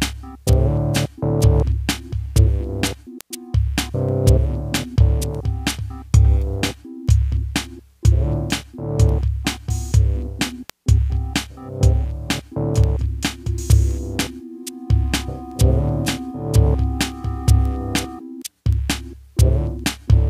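The audio has a steady run of word clock ticks from 0.53 s to 19.79 s, roughly one every half second, about forty in all. Each tick is a one-sample slip where two unlocked digital clocks drift past each other, which points to an error of around 40 ppm.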